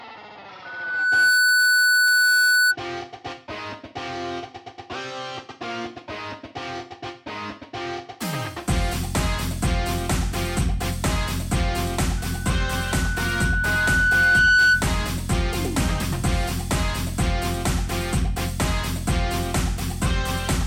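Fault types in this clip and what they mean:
Loudspeaker feedback squeal: the mic is hearing its own speaker, and at 1.5 kHz the loop gain tops one, so that tone feeds itself. It swells quickly at 0.65 s and far more slowly at 12.17 s, each time ending up roughly 10 dB above the sound.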